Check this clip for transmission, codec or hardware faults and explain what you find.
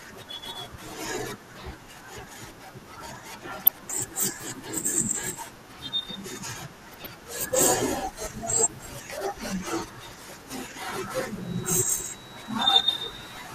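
Three faults are audible in this speech recording: a steady codec coloration throughout, two short bursts of burbling, and a whistle near the end.

Throughout the clip the speech sounds dull and grainy, with a gurgling texture in the upper range. This is likely MP2 compression at a rate of about 80 kbps. Too few bits leave the upper sub-bands starved or switched off. Unlike burbling, it is constant rather than bursty.

DAB burbling occurs from 3.65 to 3.92 s and from 6.92 to 7.12 s. The error rate was roughly 0.3% and 0.2%, and bit errors got past the correction and corrupted the audio data, putting short blips of noise into single sub-bands. The result is brief burbling, confined to these moments.

A feedback whistle runs from 11.37 s to the end. It is a thin tone at 3.9 kHz, about 20 dB below the speech, and it swells and fades slowly in level. It is likely a loudspeaker-to-microphone loop held just short of runaway. 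Unlike a fixed interference tone, it slowly swells and fades.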